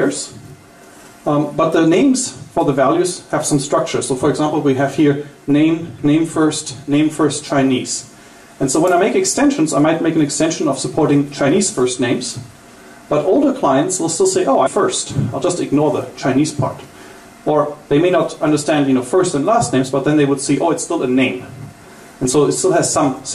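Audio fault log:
14.65 s, stream segment skipped. The audio jumps abruptly forward, with a small blip at the join. The likely cause is a segment of the stream that failed to load, so the player moved on to the next one and a stretch of the programme is missing.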